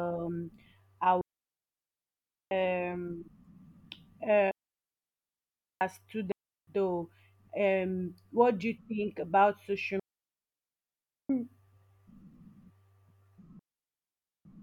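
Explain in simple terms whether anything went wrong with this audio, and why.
The speech goes completely silent five times, at 1.21–2.51 s, 4.51–5.81 s, 6.32–6.67 s, 9.99–11.30 s and 13.59–14.45 s. These are clean gaps with no crackle or hiss. This is digital wireless dropout: the wireless link lost too much data, so the receiver muted itself.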